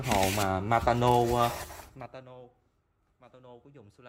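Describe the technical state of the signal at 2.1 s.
At 2.1 s a rapid ticking, like a zip being drawn, rides on top of the sound as its level falls. This is zipper noise, running from 1.6 to 2.28 s. The gain is being pulled down by about 25 dB, but in unsmoothed 3 dB jumps at roughly ten per second rather than as a continuous ramp. Each abrupt step leaves a small discontinuity in the waveform, heard as a click.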